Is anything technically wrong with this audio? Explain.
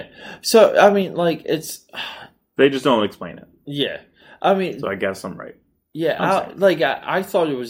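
Yes. At 1.02 s, just before "like it's", the speech and the background both drop by about 3 dB in a single step. This is a microphone volume stepped down, likely the call software cutting the device's input volume after judging it too loud.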